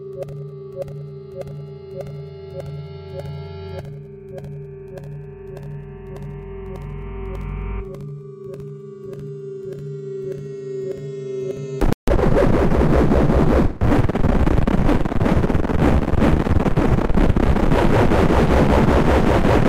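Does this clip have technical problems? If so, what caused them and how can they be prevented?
Yes. A playback stall silences the sound from 11.93 to 12.08 s, about 150 ms. The player likely ran dry or its thread was blocked. A larger playback buffer and a higher-priority audio thread prevent this.

Time-compressed catch-up follows from 12.08 to 12.22 s. The player cuts and cross-fades small slices, so the sound runs at double speed but normal pitch. Avoiding the stall removes the need for this catch-up.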